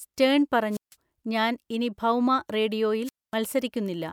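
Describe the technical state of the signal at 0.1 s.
At 0.1 s the speech signal is intact, with no dropout, distortion or other technical fault at that moment.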